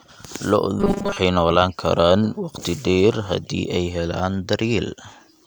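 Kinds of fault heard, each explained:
Robotic sound from repeated short buffers: from 0.80 to 1.18 s, before "noolaan karaan waqti dheer", the speech becomes a rigid metallic 200 Hz buzz, likely from a 5 ms chunk looped while late audio was skipped. Most of that stretch is repetition.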